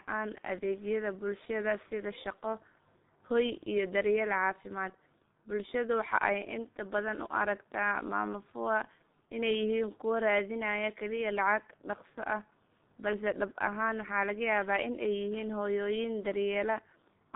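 From start to finish, the speech carries G.723.1 codec damage, and it is heavy. The line passes roughly 150 Hz to 3.7 kHz, and nothing survives above 3.8 kHz. The codec models the voice in coarse 30 ms frames at a rate that fits about 6 kbit/s. So the sound is muffled and hoarse. Consonants smear together. The voice model lags behind fast changes.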